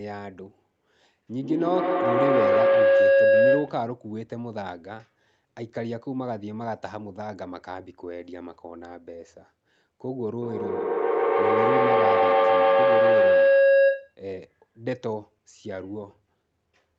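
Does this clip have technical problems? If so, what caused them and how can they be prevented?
Yes. Two feedback howls, from 1.29 to 3.87 s and from 10.42 to 14.22 s, swell to about 11 dB above the speech as a tone around 500 Hz, with the loop repeating roughly every 150 ms. A microphone-to-loudspeaker loop gained level each trip. Muting one of the devices in the room prevents it.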